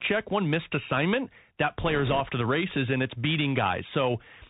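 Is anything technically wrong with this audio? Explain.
Yes, two faults are audible.

Throughout, a Bluetooth CVSD headset codec, which fits a 64 kbps link, tracks the waveform one up-or-down bit at a time. It leaves a granular hiss, scratchy s sounds, and a spectrogram that is empty above 4 kHz.

From 1.86 to 2.21 s, just before "to the races and", bit errors on the Bluetooth voice link, at a rate of around two percent, flip single small steps. They add a rushing crackle that shows as diffuse broadband speckle rather than sharp waveform spikes.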